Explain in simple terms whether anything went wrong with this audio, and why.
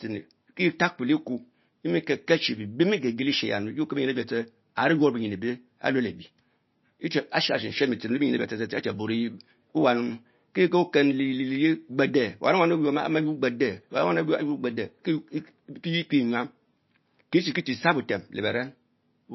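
MP3 compression damage runs through the whole clip, from start to finish. The speech has a watery, swirly quality, and nothing is heard above about 5.8 kHz, so s sounds lose their crispness. This is likely the result of squeezing the audio into a small MP3 file: with too little room, the encoder cuts off the treble and drops quieter details that flicker in and out, leaving these plainly audible artefacts.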